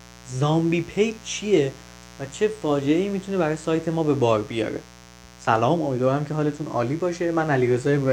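A steady, raspy mains buzz sits well below the speech throughout, from switching spikes on a 60 Hz supply leaking harmonics up into the kilohertz range.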